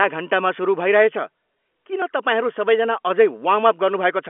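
No technical faults occur in this speech recording, which comes through a G.711 telephone line.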